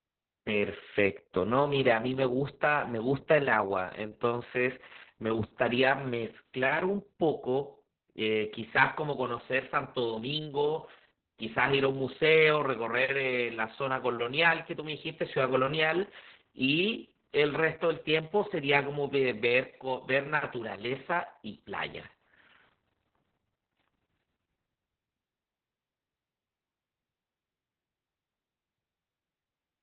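Heavy Opus voice compression runs throughout this speech: at about 6 kbps the SILK coder confines the band to narrowband, 4 kHz, and coarsely codes the excitation, leaving it muffled, hoarse and slightly robotic.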